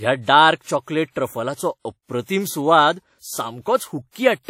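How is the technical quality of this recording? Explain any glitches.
The quality is held back by lossy compression across the whole speech clip. Throughout, there's a ringing, washy edge with hiss that swells and fades with the speech, and nothing above 17.8 kHz. That's likely WMA compression at a rate that fits around 48 kbps: the transform codec smears quantisation noise over long blocks and drops quiet detail.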